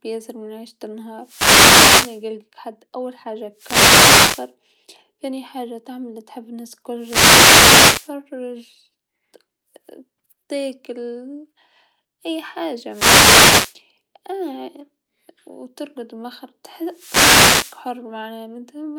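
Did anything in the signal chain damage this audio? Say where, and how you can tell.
Yes. A wireless microphone noise hit appears at 1.20–2.26 s, 3.54–4.53 s, 6.97–8.13 s, 12.89–13.77 s and 16.86–17.88 s, each roughly a second of swishing static rising over the speech. The damage happens at the analogue radio link, before the converter. As reflections cancel the FM carrier, the received signal fades and receiver noise climbs. Where the fade deepens it breaks into clicks that mask the speech.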